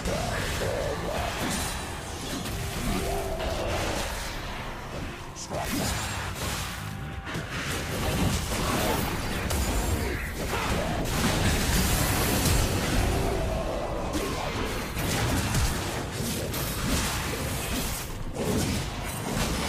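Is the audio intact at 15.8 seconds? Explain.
Yes, the audio is intact at 15.8 seconds, with no dropout, click, distortion or other fault at that moment.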